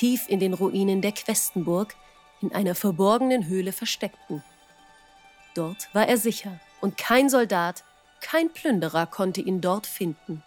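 At 3.95 s a repeated buffer gives a brief click. A tiny block, about 1.45 ms and fitting a 64-sample buffer, played twice when new audio arrived late.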